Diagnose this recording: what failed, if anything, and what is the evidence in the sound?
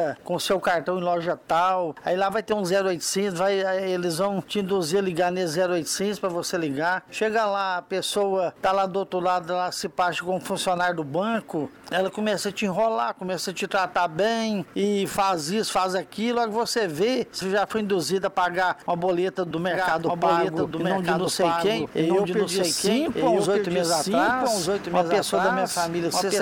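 A doubled audio track kicks in abruptly at 19.71 s and runs to the end. From there a second full-band copy trails the original by about a second, at roughly the same level, with no decay or room colour on it, so it's a clean duplicate and not an echo. The likely cause is at the capture and routing stage: the same signal was picked up a second time through a slower path and mixed back in out of step.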